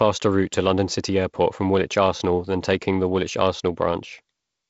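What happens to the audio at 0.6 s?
Nothing goes wrong at 0.6 s: the speech carries straight through that moment intact, with only the usual band-limited character of the G.722 wideband telephone path, which has nothing above about 7.7 kHz.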